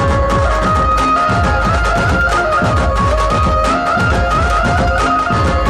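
Nothing stood out on listening to the audio.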